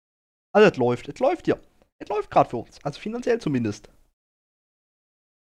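A sudden gain jump occurs at 3.41 s: from that instant to the end, the sound and its background noise both step up by about 4 dB at once. This is likely a digital gain change applied between consecutive samples with no ramp.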